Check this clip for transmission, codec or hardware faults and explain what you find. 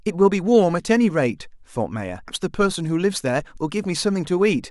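There's one hardware fault here: a CD skip at about 2.27 s in this speech clip. It's a classic laser jump. Something, whether a knock or a flaw on the disc, threw the pickup onto a different turn of the spiral, so the player drops out for an instant and resumes reading from somewhere else. You hear a tiny tick from a very brief mute, just a couple of milliseconds, followed by an abrupt discontinuity where the speech picks up from a different point on the disc.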